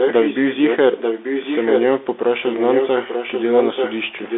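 The call ran throughout over a Bluetooth CVSD headset codec, which fits a 64 kbit/s link. Its one-bit delta coding cuts everything above about 3.8 kHz, so the speech sounds boxed into a telephone band, with a granular hiss underneath, scratchy s sounds, and plainly audible grit on louder high passages.

From 0 to 0.78 s, from 0.97 to 1.83 s, and from 2.32 s to the end, an echo leak is heard, likely because an echo canceller failed to remove loudspeaker pickup. A delayed copy of the speech trails the original by about 0.89 s, only slightly quieter than it, and doubles the speech over itself.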